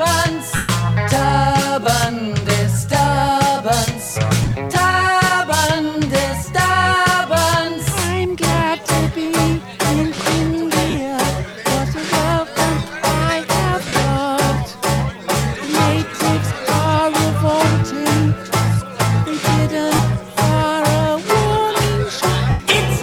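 Brief noisy smears break into the audio at 0.56–0.69, 4.42–4.52 (scattered), 10.90–10.94, 13.88–13.93, 19.95–19.99 and 22.50–22.60 s, with the longest fading toward silence: lost LE Audio frames, concealed by the LC3 decoder repeating the last spectrum with random signs.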